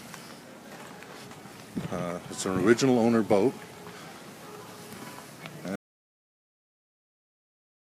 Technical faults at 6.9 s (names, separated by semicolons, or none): audio dropout to silence